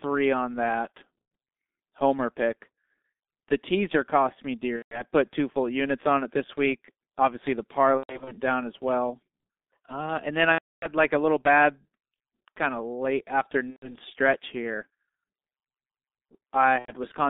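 Right from the start the speech sits behind the G.723.1 codec: a narrow line from about 250 Hz to 3.6 kHz, squeezed to 6.3 kbit/s, so it comes out muffled and hoarse, with consonants smeared because the voice model only catches up slowly.

Then there's VoIP packet loss concealed by the speech codec, six times. Just after "on that" at 1.22 s, about 90 ms is patched over, then 4.76 to 5.04 s. From 7.97 to 8.36 s, just before "down as well", the gaps are scattered rather than one block. The longest is between "and then" and "like a little bad", 10.52 to 10.87 s. After that come 13.70 to 13.96 s and 16.79 to 16.92 s. Each time the decoder keeps stretching the last pitch and filter while fading the level, so you get a buzzy tone or a coloured noise that fades, and the voice stays weak for a moment after the packets return.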